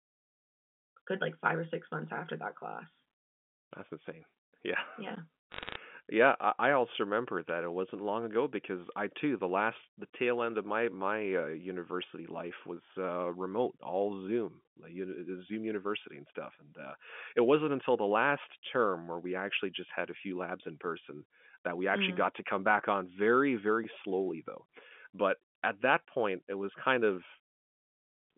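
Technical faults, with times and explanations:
5.16 s, block of digital silence: the output buffer was likely not filled in time, so about 12 ms of samples, which fits a 512-sample buffer, became zeros. The speech cuts to silence and back with no fade, and a gap this short is heard as a tick or dip rather than as silence.
5.52 to 5.76 s, bit errors on a digital phone line: about 0.7 percent of bits flipped on the G.711 mu-law line, each one altering a single sample. Flips in the sign or high bits throw samples far off, giving a burst of crackling ticks over the speech.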